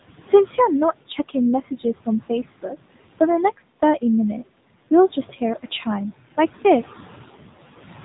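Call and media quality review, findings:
Noise suppressor artifacts, whole clip: frame-by-frame band gating pulls steady room noise down by about 15 dB between phrases, then lets it back under speech.

AMR narrowband mobile codec, whole clip: narrowband coding, a low mode consistent with 7.4 kbps. Nothing passes above 4 kHz. Pulse-excited vocal-tract model gives plainly audible buzzy, synthetic speech, and the room noise, about 19 dB below speech, swirls.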